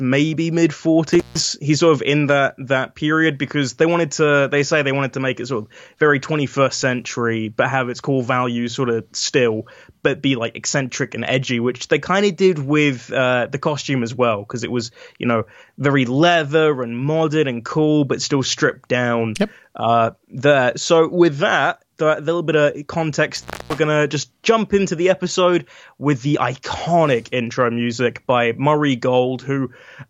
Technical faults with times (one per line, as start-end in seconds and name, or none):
1.12-1.44 intermittent contact
23.36-23.78 intermittent contact